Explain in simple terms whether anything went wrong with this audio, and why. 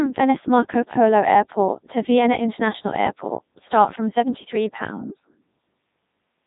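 Codec 2 vocoder damage runs through the whole speech clip: the decoder rebuilds the voice from buzzing tones, so it sounds robotic, not just muffled like a phone line.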